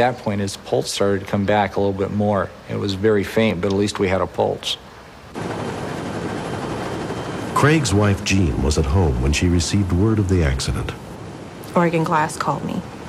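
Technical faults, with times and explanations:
3.5 s, block of digital silence: a single sharp tick, too brief to hear as a gap. The signal drops to silence for about 1.4 ms and returns with no fade, so each edge is a step, most likely an output buffer not filled in time.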